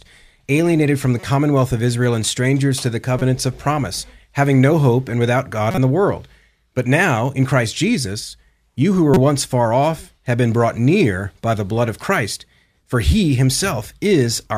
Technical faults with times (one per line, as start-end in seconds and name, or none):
1.20-1.23 corrupt frame decoded
3.19-3.22 corrupt frame decoded
5.71-5.78 corrupt frame decoded
9.14-9.17 corrupt frame decoded